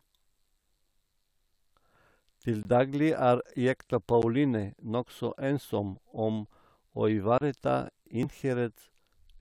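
At 2.63 s the speech drops out for 20 ms, then again at 4.22 s for 10 ms and at 7.38 s for 30 ms. Each is a block of digital silence, most likely because the output buffer went unfilled, so the sound cut out and back with no fade; the 10 ms gap is short enough to come across as a tick or dip rather than a hole.

At 8.23 s a brief burst of damaged data in the compressed stream interrupts the speech. The decoder misread corrupted frames and lost sync, searching for the next frame header before playback resumed.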